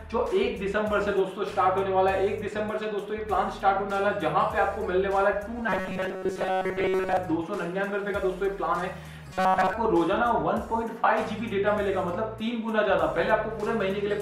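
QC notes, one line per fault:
5.69–7.17 s and 9.33–9.73 s, robotic sound from repeated short buffers: the sound becomes a rigid metallic buzz at 188 Hz, likely because late audio was covered by looping a 5.3 ms slice, with most of the real signal skipped.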